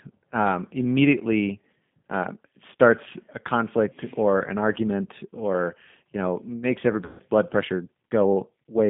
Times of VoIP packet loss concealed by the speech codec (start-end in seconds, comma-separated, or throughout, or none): 7.05-7.22